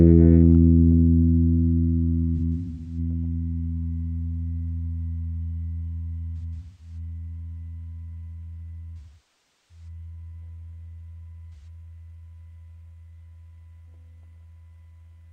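AAC frame loss with concealment at 2.36–2.98, 6.37–6.97, 8.98–9.88 and 11.54–11.67 s: lost frames are rebuilt from the last good spectrum, so the shorter gaps sound smeared, noisy or phasey and show as blurred, flattened spectral blocks. The longest, about 0.73 s, dips toward silence in the waveform.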